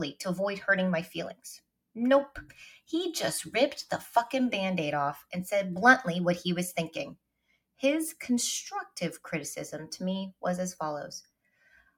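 A noise suppressor applied to music or sounds runs through the whole clip. It was designed for speech. Here it treats sustained tones and decaying tails as noise. Its gain keeps shifting by a few decibels, so the level pumps and flutters. Sudden onsets pass through more or less intact. Held material and reverb sink, and the sound thins out.

From 1.34 to 1.97 s, sound is cut by the noise suppressor. It cuts about 21 dB at its deepest, for roughly 0.4 s in total. The same happens from 7.14 to 7.82 s, again down about 21 dB, for around half a second. A final cut starts at 11.23 s and lasts to the end, also reaching about 21 dB and lasting well over half a second. Each time, steady or fading sound sinks in level and its decay is truncated.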